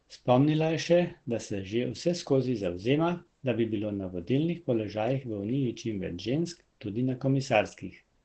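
Throughout, the speech sounds muffled and hoarse, with nothing above 8.4 kHz. This is likely heavy Opus compression in its low-bitrate speech mode.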